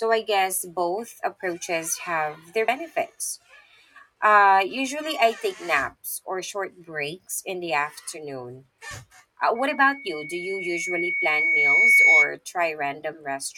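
At 2.67 s, compressed frames are skipped. The speech jumps forward by around 50 ms, which fits about two lost frames of 23.2 ms each. The speech simply jumps ahead at the join, with no silent gap in between. This sets it apart from a dropout, which leaves a silent gap.

From 9.55 s to 12.35 s, a loudspeaker feedback squeal rises at 2.2 kHz. The microphone is picking up its own loudspeaker, and at that frequency the loop gain exceeds one. The tone swells over roughly two seconds until it sits about 10 dB above the speech. That growth distinguishes it from a steady interference whistle.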